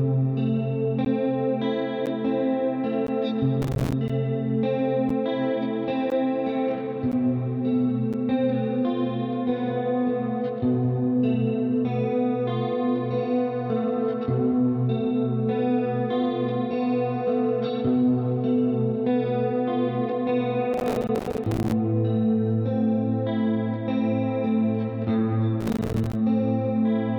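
Right from the start there's a gap between stream segments about once a second, at 1.05, 2.06, 3.07, 4.08, 5.09, 6.10, 7.12 and 8.13 s. Segment timestamps don't quite meet, so the player drops in 8 to 15 ms of hard-edged silence. Between the third and fourth of those, from 3.62 to 3.93 s, there's processor overload crackle. The processor keeps missing deadlines on its tiny buffers of a few milliseconds, and each miss leaves a silent hole, so the sound tears gritty for a moment. The same crackle comes back from 20.74 to 21.72 s and again from 25.61 to 26.15 s.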